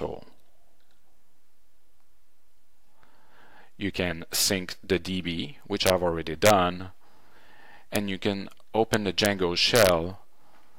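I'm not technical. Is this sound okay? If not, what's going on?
No. The sound has a fault called integer overflow. When the loudest moments get too big for the digital numbers to hold, they jump to the opposite extreme instead of stopping at the maximum. You hear this as sharp, violent cracks. They are harsher than ordinary distortion. They happen at 5.87 to 5.90 seconds, 6.46 to 6.50, 7.96, 8.94 to 9.26, and 9.76 to 9.89.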